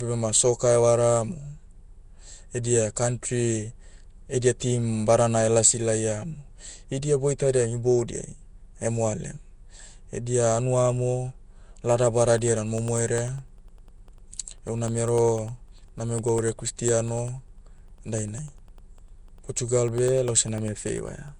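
Throughout, the speech has a rough, hissy, underwater smear, likely from Nellymoser compression. The spectrogram shows noise-filled bands and nothing above 10.6 kHz, which fits about 44 kbps. From 12.38 s to 21.28 s, periodic USB or driver dropouts cut roughly half a millisecond to silence every 0.1 s, heard as steady ticks and seen as evenly spaced gaps in the waveform.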